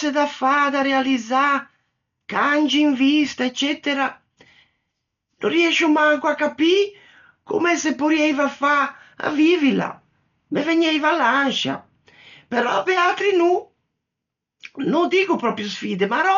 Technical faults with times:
0.00-16.38 Dolby Digital compression

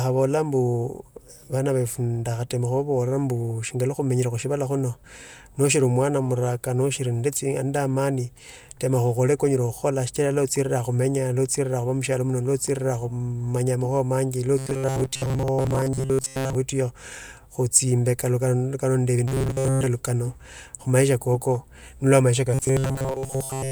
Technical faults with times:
14.58-16.55 robotic sound from repeated short buffers
19.28-19.86 robotic sound from repeated short buffers
22.54-23.71 robotic sound from repeated short buffers

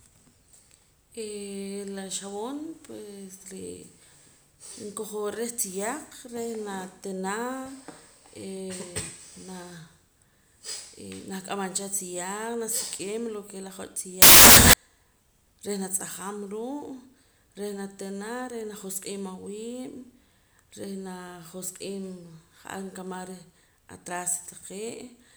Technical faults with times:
14.22-14.73 samples built from the wrong bytes

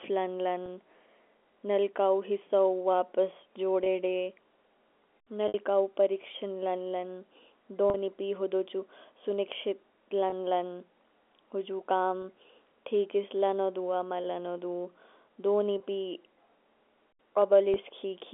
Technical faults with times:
0.66 packet loss with pitch repetition
3.84-3.86 packet loss with pitch repetition
5.48-5.54 packet loss with pitch repetition
7.90-7.94 packet loss with pitch repetition
10.30-10.32 packet loss with pitch repetition
12.22 packet loss with pitch repetition
15.78 packet loss with pitch repetition
17.74-17.76 packet loss with pitch repetition

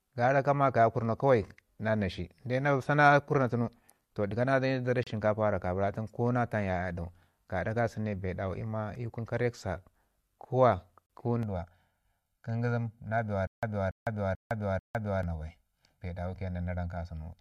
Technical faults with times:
5.03-5.07 gap between stream segments
11.06-11.10 gap between stream segments
11.43-17.41 channel delay (comb filtering)
13.47-15.23 stutter with silent gaps

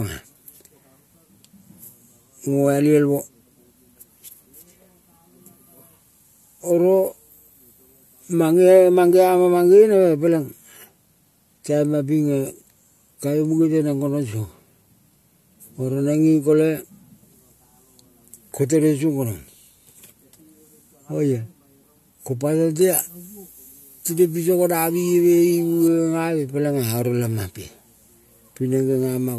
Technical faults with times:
22.81-25.88 pre-emphasis left on

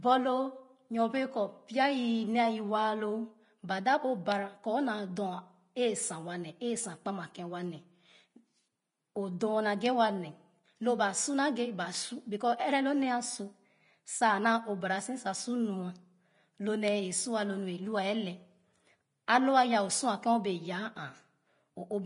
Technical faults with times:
0.00-22.06 Vorbis compression

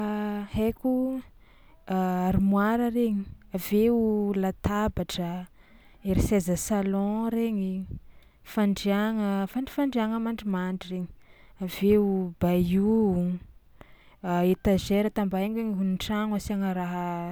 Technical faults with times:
none

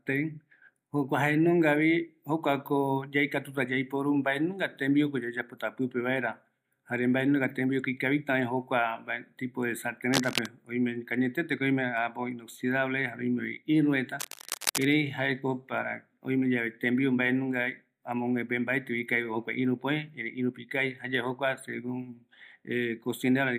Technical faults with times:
10.13-10.46 cable scratch noise
14.19-14.88 cable scratch noise

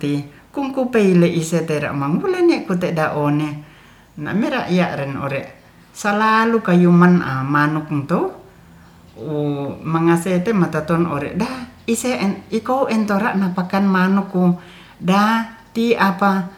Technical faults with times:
none

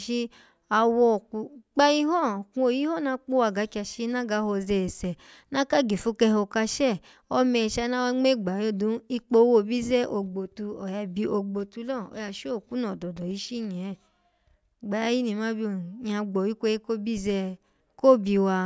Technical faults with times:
none

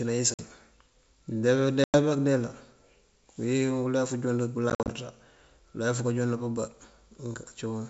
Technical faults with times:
0.34-0.40 packet loss on an ADPCM call
1.84-1.98 packet loss on an ADPCM call
4.70-4.90 packet loss on an ADPCM call

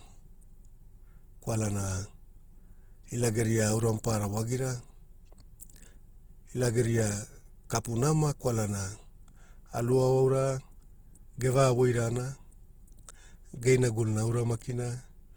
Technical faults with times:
0.00-15.37 Opus compression

